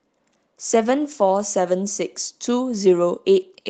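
Nothing in this speech goes wrong at any point, and the call path it came through sounds as expected for an Opus link, with the top end tapering off around 8 kHz.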